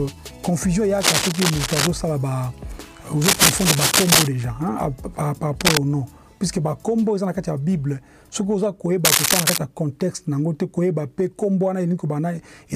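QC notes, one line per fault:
1.00–1.88 s, 3.22–4.27 s, 5.61–5.79 s and 9.05–9.58 s, cable scratch noise: dense, ragged rustling bursts over the sound, about level with it in the first and a little louder after. Likely a worn cable or connector being moved, its contact flickering.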